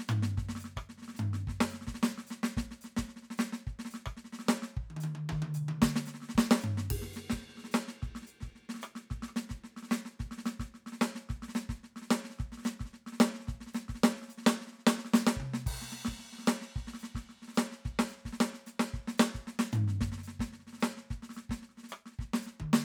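The music runs without any audible technical fault at any point in the recording.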